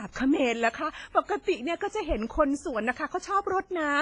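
Speech that has likely passed through WMA compression at a low bitrate, consistent with roughly 24 kbps, damages the audio heavily throughout: transform quantisation noise smears into a ringing, washy haze with hiss that breathes alongside the voice, and nothing survives above 10.5 kHz.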